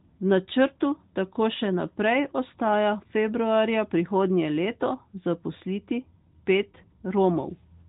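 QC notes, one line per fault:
No faults detected; the speech is carried over the AMR narrowband mobile codec at 12.2 kbps, which limits the audio band to below 4 kHz and leaves only light coding effects.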